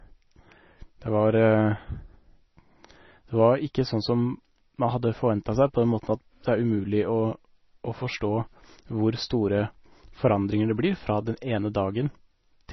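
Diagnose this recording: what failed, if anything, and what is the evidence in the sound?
Codec stage: the speech is cut above 5.9 kHz and heavily watery, likely MP3 compression starved near 24 kbps; the swirl rules out plain filtering.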